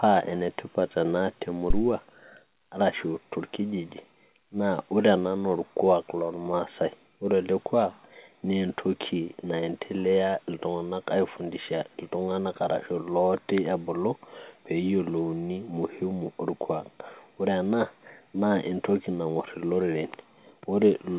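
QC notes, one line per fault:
1.70–1.85 s, phantom power thump: a deep, low thud breaks into the speech and dies away fast, its tail falling off within about 34 ms and gone by 1.85 s. This is what happens when phantom power or another supply is switched on a live input. The sudden voltage step passes through the coupling capacitors and arrives as a single low-frequency pulse, heard here through the call path's band, which carries nothing above 4 kHz.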